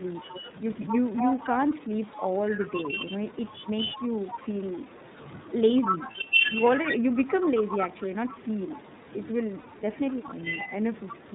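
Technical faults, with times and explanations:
Throughout, iLBC codec. The sound is band-limited, with nothing above 4 kHz, and has a plainly rough, slightly synthetic edge. Each frame's excitation is coded on its own at a low rate. The texture fits iLBC's 13.33 kbps mode with 30 ms frames.
0.21 to 11.35 s, speech suppressed in double talk. The level dips repeatedly, by about 15 dB at the deepest, for about five seconds in all. The top end thins or drops out in pieces. An echo canceller likely mistook overlapping talk for echo and turned it down.
4.15 to 4.39 s and 5.85 to 11.14 s, echo leak. A delayed copy trails the sound by 236 ms. It sits about 10 dB below in the first short scrap and about 5 dB below in the long stretch. A loudspeaker echo likely slipped past the far end's canceller.
6.11 to 6.16 s and 9.60 to 9.67 s, lost iLBC frames. The gaps last 30 ms and 60 ms, which fits one and two missing 30 ms frames. 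The decoder repeats the last pitch cycle with noise, giving a brief buzzy held vowel, then recovers at once.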